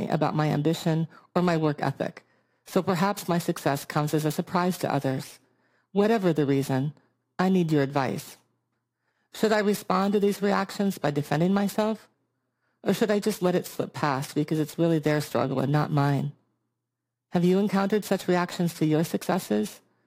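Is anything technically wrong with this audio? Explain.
Yes. Throughout the speech there is a rough, metallic edge that sits on the sound itself and disappears whenever it falls silent. This is periodic clock jitter: interference is wobbling the converter's sampling clock at a steady rate of around 3 kHz, so every frequency in the signal picks up sidebands spaced about 3 kHz above and below it. Higher components are hit hardest, which is why the sibilant, brighter parts sound grittiest.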